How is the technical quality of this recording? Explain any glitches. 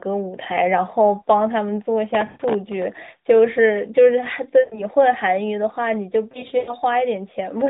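The speech is band-limited to roughly 150 Hz–3.7 kHz with light codec roughness, and it breaks up three times from lost AMR speech frames. At 2.26–2.42 s and 4.60–4.85 s the sound stretches into a smeared buzz that fades out. At 6.32–6.75 s it stutters through several short dropouts, the longest about 100 ms. In each case radio errors corrupted frames, and the decoder kept repeating the last good pitch and vocal-tract settings at falling gain.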